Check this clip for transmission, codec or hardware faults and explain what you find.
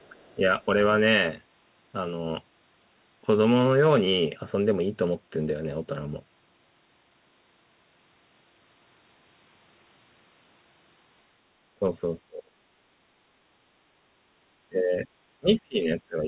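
Two echo-related faults are present: faint far-end leakage at the very start and repeated dips in the speech from double-talk suppression. The band stops at 4 kHz throughout, which fits a narrowband telephone codec such as G.711.

Other side's voice leaking through, 0.0 to 0.35 s: a very faint second voice sits under the opening, roughly 35 dB below the main speech. This is likely residual echo. The far end played over a loudspeaker and reached the microphone, and the echo canceller did not fully remove it. It is barely audible.

Speech suppressed in double talk occurs at 0.10 to 0.15 s, 0.35 to 0.42 s, 11.79 to 11.84 s, 12.21 to 12.51 s, 14.69 to 15.07 s, and from 15.4 s to the end. The speech level drops by about 5, 10, 10, 25, 20 and 25 dB respectively. The echo canceller likely could not separate the near talker from loudspeaker echo while both were active, so it attenuated everything. 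The short events are brief level flickers. The longer ones from 12.21 s on are deeper dips where the voice sinks away.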